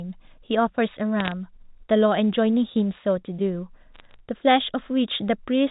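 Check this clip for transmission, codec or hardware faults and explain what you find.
Two short bursts of bit errors on a digital phone line, at 1.20 to 1.32 s and 3.94 to 4.14 s. Stray flipped bits in the mu-law samples, at a rate of a few tenths of a percent, knock single samples off. Where a sign or high-order bit is hit, you hear sharp ticks, so each burst comes across as brief crackle sitting over the speech. The speech underneath is unchanged, and the line itself still sounds like ordinary G.711 telephone audio, band-limited to 4 kHz.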